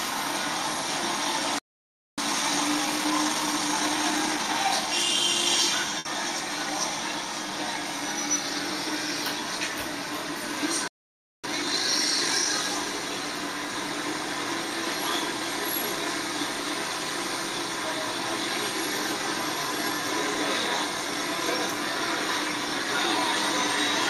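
At 1.59 s the audio cuts to silence in mid-flow and stays silent until 2.18 s, a gap of about 0.59 s. This playback stall was likely caused by the player running out of buffered data or its output thread being blocked. What separates it from a dropout caused by lost packets is the dead silence and the length: over half a second of nothing, with no sustained tone or fading tail bridging the hole.

From 2.18 s to 4.54 s comes a time-compressed catch-up. The player works off the backlog left by the stall by removing short slices and cross-fading across the joins, so the sound runs at 1.25 times normal speed without any rise in pitch. That unchanged pitch is what distinguishes it from a sped-up playback clock.

At 5.99 s a burst of packet loss lasts about 60 ms, up to 6.06 s. Rather than going silent, the receiver extends the last sound it had and turns it down, producing a brief held buzz or fading hiss. 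The audio then resumes about 60 ms further on, with that piece missing. This short, filled gap is what sets it apart from the stalls.

The same stall pattern returns at 10.88 s and lasts about 0.56 s, to 11.44 s. A stronger catch-up follows at 1.5 times speed until 12.54 s. At that rate the rushing is more obvious than in the first catch-up, but the pitch still stays level.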